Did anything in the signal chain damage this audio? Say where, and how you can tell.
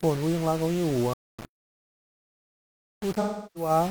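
Yes. A sample-format conversion likely rounded the speech to about 5 bits without dither, leaving grainy distortion that tracks the voice, roughly 20 dB below it, throughout.

At playback, a buffer or thread likely stalled: output drops to silence from 1.13 to 1.39 s, about 250 ms, then the speech resumes.

AAC frame loss with concealment hit the codec stream from 3.21 to 3.70 s. The decoder patched about 340 ms, roughly eight frames' worth, from the last good spectrum.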